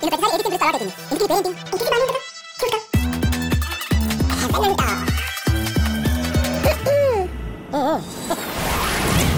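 The whole clip runs at double speed and sits a full octave high, 12 semitones up, from start to finish. That's a classic wrong sample rate fault: the samples are being clocked out faster than they were captured, with no conversion in between, so timing and pitch shift together by the same factor. An exact 2:1 ratio fits audio recorded at 24 kHz being played back at 48 kHz.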